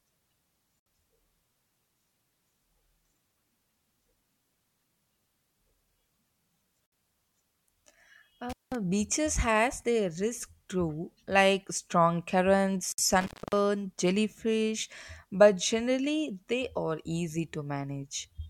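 The speech was encoded in separate pieces and joined without trimming each encoder's start delay and end padding, so a gap at a join of encoded pieces opens at 0.80 s (about 66 ms) and again at 6.86 s (about 60 ms). Each is a short silence with smeared edges before the sound resumes where it left off. At 8.50 s, an intermittent contact in a loose cable or plug breaks the line for 190 ms, cutting the sound with crackle at both edges and leaving faint hiss. A third join gap, about 60 ms, follows at 12.92 s, keeping the 6 s spacing. At 13.21 s the contact opens again, this time for 264 ms, with the same crackling dropout.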